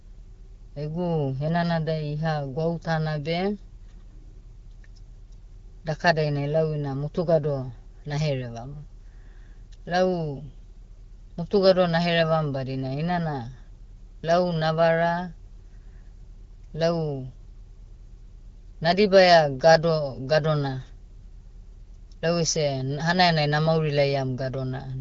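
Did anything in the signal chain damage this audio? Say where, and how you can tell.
No, nothing in the chain is doing any harm here; the speech comes through the AMR wideband (HD Voice) codec at 12.65 kbit/s, a rate at which it stays clear, and there's nothing to point at anywhere along the way.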